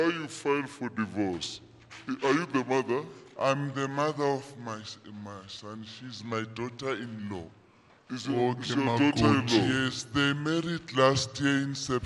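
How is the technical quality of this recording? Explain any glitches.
The recording has one fault, a wrong sample rate, and it runs through the whole clip. Everything plays at 0.726 times normal speed and about 5.55 semitones low, which fits 44.1 kHz material being played back at 32 kHz without any rate conversion. The sound is dragged and lowered together by the same ratio. Two things set it apart. A pitch shift would leave timing intact, and tape wow would make the pitch waver, but here the slowdown and drop stay locked and steady.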